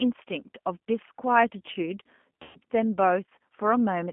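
From the start, the speech is carried by the G.729 codec. It sounds narrow, with nothing below about 200 Hz or above about 3.4 kHz. Each short frame is rebuilt from a vocal tract filter, a pitch guess and a few pulses rather than the real waveform. The result is rough and a little synthetic throughout, plainly audible, which fits an 8 kbit/s G.729A link.

At 2.43 s comes VoIP packet loss concealed by the speech codec. About 120 ms of audio went missing, which fits four lost packets. The decoder fills the gap by repeating its last pitch and filter at falling gain. The speech smears into a stretched, fading sound. Because each frame builds on the one before, the damage lingers until about 2.58 s.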